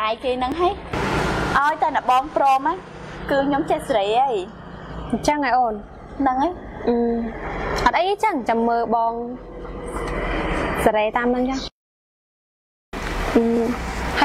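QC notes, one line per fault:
0.52 s, dropped buffer (overrun): the audio jumps ahead with no silent gap, as a few milliseconds of material are missing and the two edges butt together. The likely cause is samples being overwritten before they were read. A dropout would instead leave a short hole of silence.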